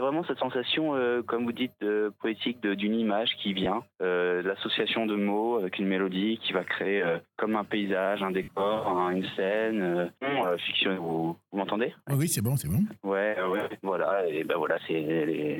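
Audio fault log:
3.64–3.66 s and 8.43–8.48 s, lost LE Audio frames: two brief dropouts of 20 ms and 50 ms, which fit two and five 10 ms LC3 frames. In each gap the decoder conceals the loss by replaying the last good spectrum with randomised phase signs, so the sound briefly turns into a grainy, noisy smear.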